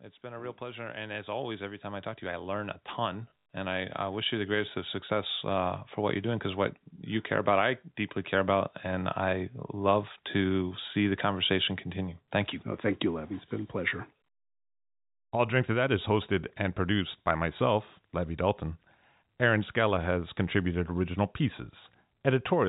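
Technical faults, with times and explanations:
0.21–6.53 s, automatic gain rising: voice and background swell together by about 13 dB, as automatic gain control slowly raises its gain on input it judged too quiet.
3.3 s, packet loss with last packet repeated: a brief robotic stutter, as lost audio totalling 100 ms over 160 ms, longest run 80 ms, is filled by replaying the previous packet, which fits about five 20 ms packets.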